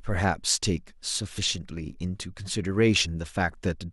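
A speech recording with compressed frames skipped at 3.02 to 3.06 s, where about 50 ms of audio is lost and the sound jumps forward. Unlike a dropout, no silent gap appears.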